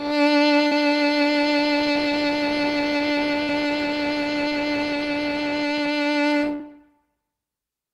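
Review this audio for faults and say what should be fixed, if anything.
Three spots of short concealed packet loss in the music, at 0.67–0.74 s, 3.43–3.50 s and 6.55–6.62 s. Each time about 40 ms arrived late, and the receiver extended the preceding sound to bridge it, leaving a brief smear. A larger jitter buffer or forward error correction would prevent it.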